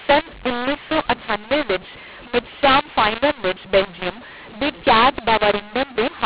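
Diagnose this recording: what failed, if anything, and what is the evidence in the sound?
The codec stage tripped up here: a mu-law and A-law mix-up. The G.711 stream was written as A-law but read back as mu-law, so every level maps wrong. The speech stays harsh and gritty for the whole clip, topped at 4 kHz as telephone audio is, and the pauses fill with hiss because quiet samples come back lifted.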